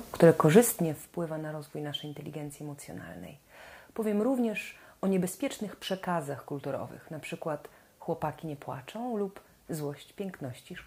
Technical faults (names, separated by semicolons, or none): zipper noise